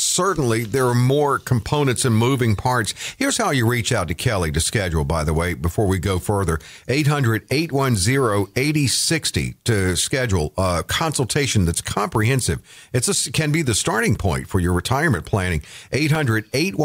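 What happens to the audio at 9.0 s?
Nothing goes wrong at 9.0 s; the speech carries on intact through that moment, with no dropout, click, distortion or other fault to be heard there.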